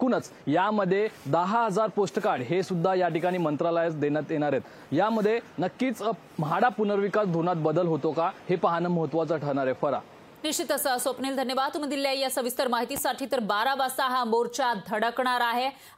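At 12.97 to 13.00 s a single loud pop, peaking roughly 10 dB above the sound, likely from a voltage pulse, shows as a tall waveform spike and a full-height spectrogram stripe.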